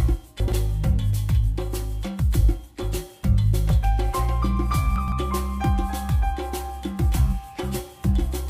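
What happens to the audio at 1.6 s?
Nothing goes wrong at 1.6 s; the audio there plays through intact, with no dropout, click or other fault.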